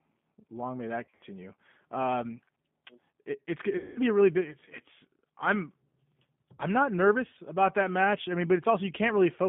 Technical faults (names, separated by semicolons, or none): G.729 codec; VoIP packet loss concealed by the speech codec